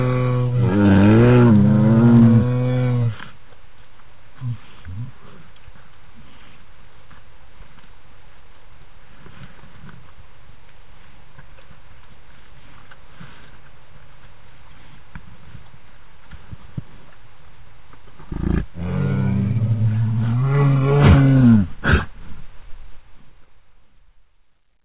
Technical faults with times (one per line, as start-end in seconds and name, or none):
none